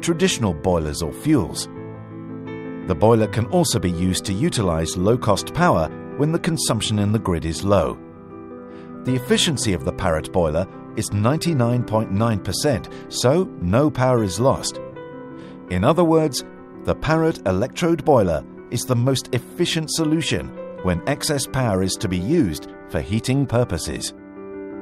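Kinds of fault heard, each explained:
No technical faults can be heard anywhere in this audio. Nothing in it calls for an explanation of any fault.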